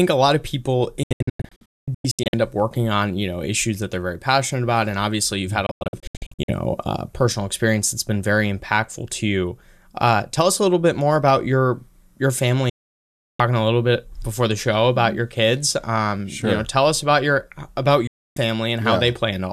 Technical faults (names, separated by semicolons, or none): digital broadcast dropout